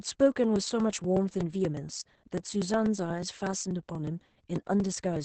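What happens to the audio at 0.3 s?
At 0.3 s the speech is caught in periodic USB or driver dropouts. They run from 0.08 to 5.16 s, every 0.12 s. Each time a background task stalls the bus or driver, a few milliseconds of audio are skipped, leaving a regular ticking pop.

The same moment also carries heavy Opus voice compression, present across the whole clip. The SILK coder caps the band near 8 kHz and codes the excitation coarsely, which points to a rate around 10 kbps. The speech sounds muffled, hoarse and faintly robotic.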